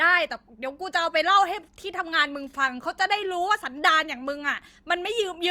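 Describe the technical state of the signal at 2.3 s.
The signal at 2.3 s is intact, with no audible fault at that point in the speech.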